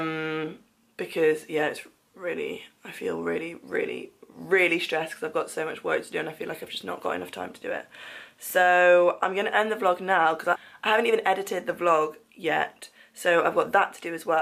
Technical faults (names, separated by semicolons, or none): CD scratch ticks